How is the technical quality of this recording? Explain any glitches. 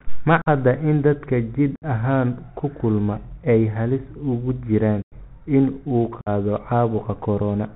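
The recording quality is poor. The speech sits on a narrowband Bluetooth headset link and breaks up four times.

The Bluetooth CVSD headset codec runs through the whole clip. Nothing above 4 kHz survives, so the speech sounds boxy. Sibilants turn scratchy, and a grainy hiss lies under everything. This codec sends one up-or-down bit per sample, and its adaptive step cannot keep up with loud, fast high-frequency movement. The result fits a 64 kbps CVSD link. Ordinary telephone-band filtering would be muffled but clean, whereas here the hiss and the scratchy s sounds are the giveaway.

Unconcealed Bluetooth headset packet loss punches four short holes into the speech. They fall at 0.42–0.48 s (45 ms lost), 1.76–1.83 s (60 ms), 5.02–5.13 s (97.5 ms, the longest) and 6.21–6.29 s (52.5 ms). Each loss suggests roughly 7 voice packets dropped between headset and phone (about 15 in the longest), with silence or an idle pattern left in their place. 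The edges are abrupt and can click, and the speech resumes briefly quieter as the codec's step size recovers. A network dropout with concealment would smear the gap instead of leaving these hard holes.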